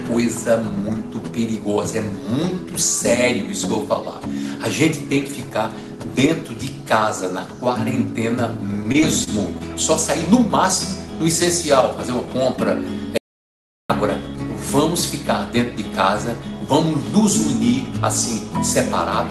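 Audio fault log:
8.57–9.62 s, repeated packet loss (robotic sound): Over roughly one second the stream breaks up in nine short gaps, the longest about 28 ms. Each gap is filled by stretching the last received sound forward, and about 12% of the stretch ends up synthesised this way. Because the gaps come in quick succession, the patched pieces give the sound a choppy, robotic texture with small fragments missing. The call path's band-limited coding cuts content above about 12 kHz.
13.18–13.90 s, audio dropout to silence: The signal cuts out mid-flow for about 0.72 s and then resumes. The gap is digital silence with no room tone or noise floor underneath, so the input feed was likely lost, through a disconnect, link failure or mute, while the recorder kept writing silence. Whatever occurred during that interval is not recoverable, and both the cut and the return sound abrupt.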